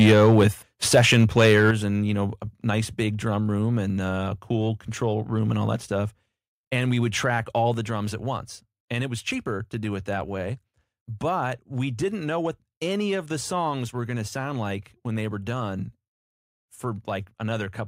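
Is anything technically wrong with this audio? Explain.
Yes, the speech clips and then drops in level several times.

Microphone overload occurs from 0.0 to 0.47 s, about 5 dB over full scale with roughly 7 percent of samples flattened, and from 0.94 to 1.71 s, about 2 dB over with around 3 percent clipped. The likely cause is input gain set too high, so the converter cuts off the peaks and adds a harsh, crackling edge.

Microphone volume stepped down occurs at 0.13 s (about 2 dB), at 1.71 s just before "and you know a" (about 7 dB), and at 7.74 s between "we would track all" and "the drums at once" (about 3 dB). Voice and background drop together in a single step, likely the call software cutting input volume after detecting loud or clipped peaks.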